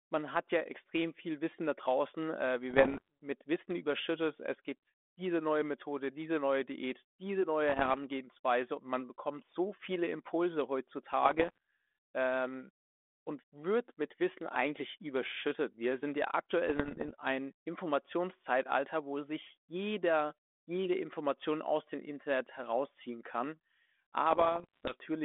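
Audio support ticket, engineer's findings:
Bit errors on an ADPCM link. Pops and rough bursts with brief level jumps at 2.70–3.08, 7.69–7.97, 11.22–11.58, 16.67–17.13 and 24.30–24.95 s. Flipped bits, around 0.7 to 1 percent, corrupt the decoder's step size and predictor, so each error rings on for milliseconds.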